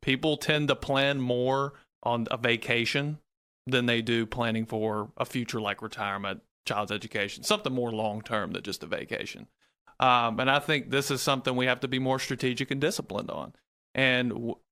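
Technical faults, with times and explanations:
Careful listening to the speech turned up nothing that stood out as a technical problem.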